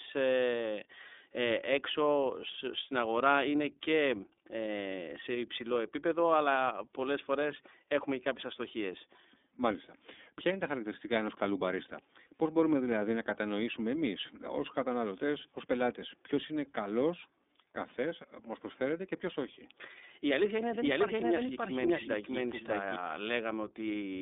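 Speech coded throughout with the iLBC codec: nothing above 3.7 kHz, a 250 Hz to 3.6 kHz line band, and plainly audible rough, synthetic texture consistent with 30 ms frames at 13.33 kbps. From 20.42 to 22.96 s there is a doubled audio track: a dry, equally loud copy trails around half a second behind and cuts in and out abruptly, likely from a second, slower capture path.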